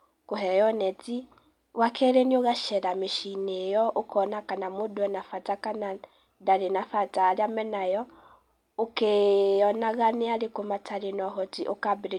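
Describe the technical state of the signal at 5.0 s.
At 5.0 s the speech signal is intact, with no dropout, distortion or other technical fault at that moment.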